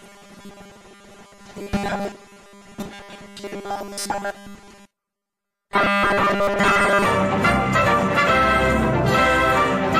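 From 0.01 to 7.05 s the sound has robotic sound from repeated short buffers: a rigid, metallic buzz at a fixed 200 Hz, which fits a 5 ms slice being played over and over. The likely cause is new audio arriving too seldom, so the playback fills the gaps by repeating the last short buffer, and most of the real material is skipped. What separates this from plain codec warble or ring modulation is the steady 200 Hz pitch laid over everything, while the underlying sound is still loosely followed.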